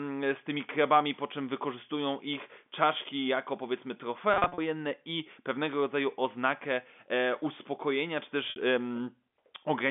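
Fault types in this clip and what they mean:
Packet loss with pitch repetition: Missing stretches were filled by repeating the last pitch period. Held, buzzy patches follow "ich czaszki jako powiedzmy" and "uspokojenia czy".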